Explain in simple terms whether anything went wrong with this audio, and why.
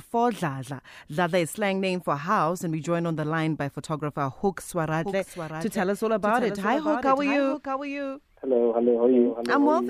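Yes, from 4.92 s to the end there is a doubled audio track: a second, somewhat quieter copy of the speech trails about 0.7 seconds behind, likely from the sound being captured twice. Unlike an echo, it never fades, has no roomy colour, and starts abruptly.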